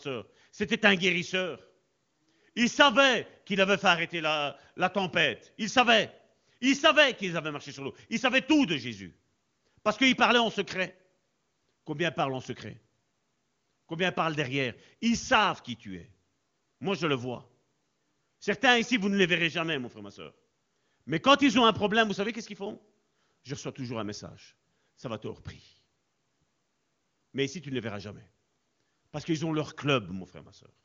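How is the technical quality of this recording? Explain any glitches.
No glitches are audible: the speech has the roughly 7.4 kHz ceiling and at most faint coding texture of the AMR wideband (HD Voice) codec, consistent with its top 23.85 kbit/s rate.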